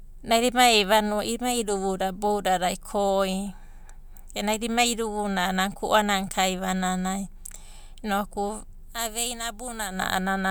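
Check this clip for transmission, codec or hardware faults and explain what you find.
No transmission, codec or hardware fault can be heard anywhere in the speech recording, which stays continuous and steady throughout.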